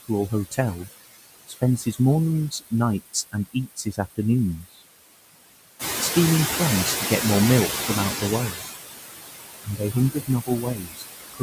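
Noise suppressor artifacts run through the whole clip. The suppressor pulls down every band it judges to be steady noise by about 18 dB, frame by frame, so the background dips between phrases and swells back under the speech. On a spectrogram the noise floor looks patchy. In the waveform the gaps sit lower than the voiced stretches, pumping with the speech.

Speech cut by the noise suppressor first appears between 1.47 and 1.96 s, then from 3.13 to 4.18 s and from 4.64 to 4.82 s. Each time the suppressor mistook quiet speech energy for noise and turned it down by about 18 to 19 dB, a couple of hundred milliseconds in total in each of the first two spans and a brief moment in the third. Soft consonants and word tails sound swallowed. A spectrogram shows high-frequency fricative energy fading out early, and the waveform shows endings tapering abruptly.

Noise suppressor catching up follows. 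The room noise steps up by about 11 dB near 6 s, to roughly 5 dB below the speech. The suppressor's noise estimate lags, so from 5.79 to 8.53 s, about 2.7 s, the louder background leaks through before settling to about 13 dB of reduction. A spectrogram shows a broadband floor that brightens and then gradually darkens. The waveform's baseline thickens, then thins.

Overlapping the end of that stretch, speech is cut again from 8.19 to 8.63 s, by about 12 dB over roughly 150 ms. The longest cut runs from 9.64 to 11.42 s, reaching about 19 dB and clipping the soft parts for well over half a second in total. Trailing syllables fade in the spectrogram and the waveform's quiet tails.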